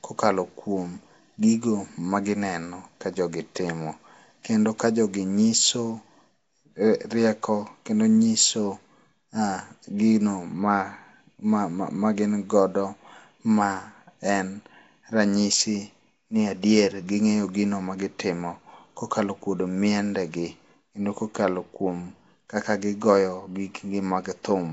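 From start to end the speech carries a rough, hissy halo and a smeared, underwater quality, with nothing above about 7.7 kHz. The likely cause is Nellymoser compression: bands too weak for its fixed bit budget are filled with noise, which fits a rate around 32 kbps.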